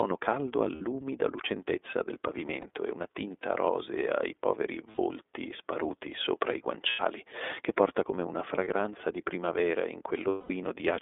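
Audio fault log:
throughout, iLBC codec: The speech passed through a narrowband iLBC coder whose roughness fits its 13.33 kbps mode with 30 ms frames. Each frame's excitation is rebuilt on its own, and the line keeps only about 300 Hz to 3.6 kHz. The result is thin, band-limited speech with a plainly audible rough, slightly synthetic edge where the coarse excitation model stands in for the natural voice.
0.75–0.82 s, 2.61–2.65 s, 4.91–4.99 s, 6.90–7.00 s, 8.64–8.68 s, 10.28–10.51 s, lost iLBC frames: Packets went missing and the decoder filled each gap by repeating the last pitch cycle blended with noise. The gaps run 60, 30, 60, 90, 30 and 210 ms, which points to one to seven lost frames. Each one sounds like a brief held, buzzy vowel, for example just before "lucentezza del", just after it ahead of "e una tinta rosea", and between "che porta come una" and "di primavera in". The final, longest gap fades. 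Because frames decode independently, the voice is right again almost at once after each.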